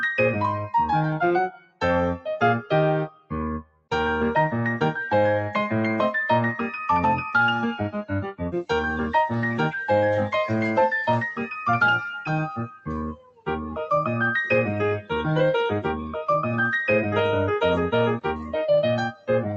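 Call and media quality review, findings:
Noise suppressor applied to music or sounds, whole clip. Level pumps and flutters, swinging about 5 dB. Speech-tuned suppressor is classing sustained tones, ambience and tails as noise: attacks pass, held material sinks and thins. Top end stops near 8 kHz, consistent with the Opus call leg.

Sound cut by the noise suppressor at 1.51–1.82 s, 3.09–3.32 s, 3.63–3.91 s, 13.15–13.47 s and 19.13–19.29 s. Same suppressor gating steady or decaying content hardest. Dips of about 17–18 dB, about 13 dB in the last one. Short bursts are less affected.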